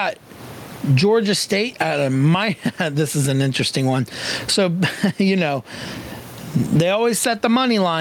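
Gain pumping runs through the whole speech clip. The level swings by around 20 dB. The room noise sits about 34 dB below the speech. Loud and soft parts end up squeezed together, and the sound feels flattened. The likely cause is gain set far too high at the microphone, with a fast limiter clamping down on every peak.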